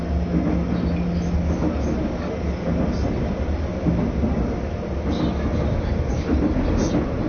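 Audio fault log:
throughout, AAC compression: nothing gets through above 6.5 kHz, so everything sounds dull, with plainly audible smearing and warble. That's likely AAC-LC starved of bits, which fits a bitrate around 24 kbps, where the encoder chops the top band and coarsely quantises the rest.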